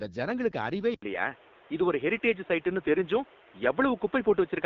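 From the first moment the speech has the rough, raspy grain of the AMR wideband (HD Voice) codec running at a low rate, which fits its 8.85 kbit/s mode. The codec rebuilds the voice from a simple pulse-and-filter model, and at this rate that model leaves a buzzy, plainly gritty texture. On a spectrogram, energy stops cleanly near 7.4 kHz. The band above roughly 6.4 kHz looks smeared and noise-like rather than harmonic, because the codec fills it with shaped noise.

At 0.94 s the sound drops out for about 80 ms. It then returns duller and boxier, which is likely an input switched to a poorer device. From there to the end, nothing reaches above 3.8 kHz, so the spectrogram's upper band goes abruptly empty. The waveform's overall level shifts by around 5 dB, and a new background noise sits some 30 dB below the speech. That noise is visible as a faint floor between syllables.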